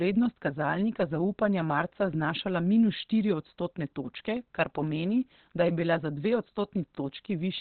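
A speech clip that sounds muffled and hoarse from start to finish, with nothing above about 4.3 kHz. The likely cause is heavy Opus compression in its speech (SILK) mode, which fits a narrowband setting around 12 kbps.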